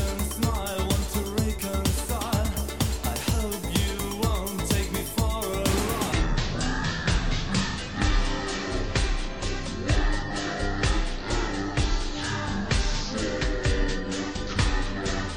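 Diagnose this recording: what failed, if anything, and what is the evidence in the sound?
A section at the wrong speed runs from 6.13 s to the end of the clip. At that point the sound abruptly slows to about half speed (0.506 times) and drops by roughly ten semitones, with tempo and pitch sinking together and staying there. The likely stage is playback or editing, where that stretch was clocked at about half the rate it was recorded at, stretching every event in time and lowering its pitch in proportion.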